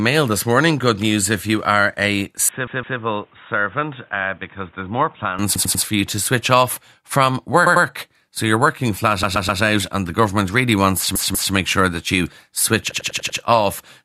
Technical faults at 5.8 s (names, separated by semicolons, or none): repeated frames